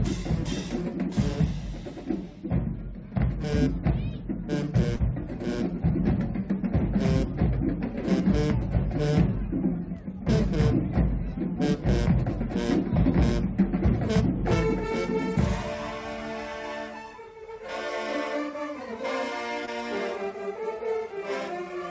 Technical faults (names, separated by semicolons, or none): short concealed packet loss